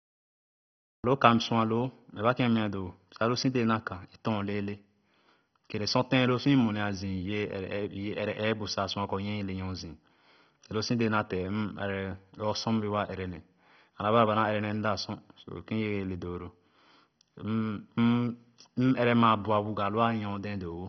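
The first 1.04 s are digital silence, a flat line on the waveform, and at 1.04 s the speech appears already mid-sound with no attack or fade-in. This cut-off start happens when the recording or stream began late and caught the audio partway through.

Throughout the clip the sound is dull and gurgling, with a granular roughness. On a spectrogram nothing reaches above 6.1 kHz, and the upper bands show patchy, flickering energy. The likely cause is heavy MP2 compression at a low rate, pointing to about 32 kbps, which switched off the upper sub-bands and coarsely quantised the rest.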